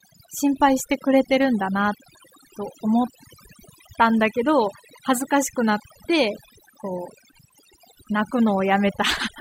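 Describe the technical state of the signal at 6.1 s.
Overdone noise removal affects 6.1 s, as it does the whole clip. The noise reduction is set far too aggressively, cutting frequency bands that sit near the noise estimate. The background drops and breaks up into twinkling specks, and quiet parts of the speech are cut along with it.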